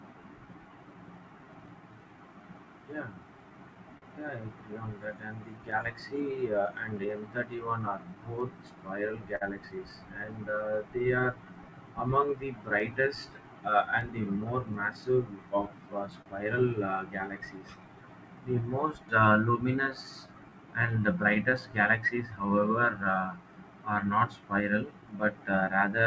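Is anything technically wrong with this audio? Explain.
Yes. There is clock drift between sender and receiver, with repeated timing corrections and scattered short gaps. The audio comes through a wideband call codec with nothing above 8 kHz.

Clock drift between sender and receiver runs throughout. The sender's clock runs roughly 4% slow, so the receiver's buffer keeps draining and must be topped up continuously.

Repeated timing corrections run from 0.20 s to 25.91 s. The receiver stretches the audio to about 97% speed, adding roughly 0.7 s overall. This is heard, if at all, as slight hiccups and an unsteady tempo.

Scattered short gaps fall in four stretches: 2.04–5.96 s, 7.90–9.43 s, 11.32–16.28 s and 20.86–22.10 s. Each holds a handful of late or lost packets, the longest around 10 to 50 ms. Each hole is patched by extending the preceding sound, which leaves brief ticks and smears.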